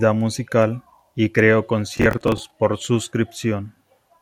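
From 1.97 to 2.51 s, just after "musical y creó", the speech breaks into a burst of processor overload crackle. The processor keeps missing the deadline for its short audio buffers, around 10 ms each, roughly twenty times over the stretch, and each miss replays a stale scrap of old audio with hard edges. It sounds like gritty tearing over the speech. On a waveform the stretch shows abrupt steps and discontinuities. A spectrogram shows dense vertical broadband streaks, which end when the load clears.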